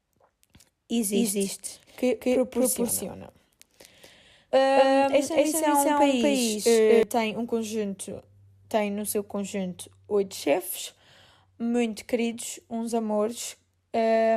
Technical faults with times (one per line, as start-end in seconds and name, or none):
1.13-7.03 doubled audio track